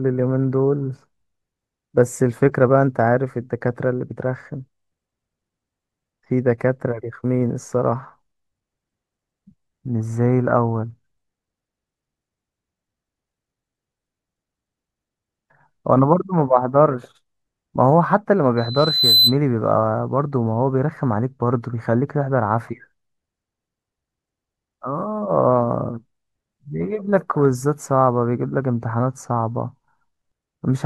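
Loudspeaker feedback squeal runs from 18.57 to 19.37 s. A microphone is picking up the loudspeaker it drives, and at 4 kHz the loop gain passes one, so a single whistle swells over about half a second until it sits slightly louder than the speech.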